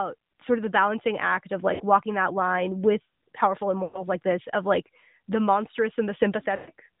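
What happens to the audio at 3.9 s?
At 3.9 s the audio falls inside a burst of lost AMR speech frames running from 3.84 to 4.05 s. About 100 ms of coded speech is missing, which fits a run of five consecutive 20 ms frames failing their checksum. The decoder conceals the gap by repeating the last good pitch and vocal tract parameters at a falling gain. The sound is therefore smeared and stretched, then fades toward silence before speech resumes briefly weak or rough.

The same moment also carries the AMR narrowband mobile codec damage present throughout the clip. Narrowband AMR samples at 8 kHz, so nothing above 4 kHz survives, and the speech is rebuilt from a vocal tract model excited by a few pulses per subframe. The coding damage is plainly audible. It is consistent with a mid-rate mode around 10 kbps. The result is a band-limited, somewhat buzzy, synthetic quality.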